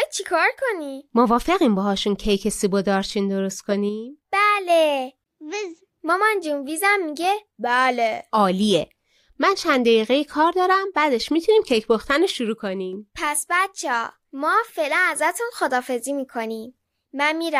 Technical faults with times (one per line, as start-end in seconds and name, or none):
12.30-12.93 sudden gain jump